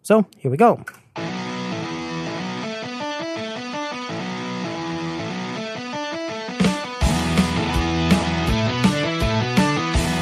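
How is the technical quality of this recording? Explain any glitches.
No glitches or faults are audible.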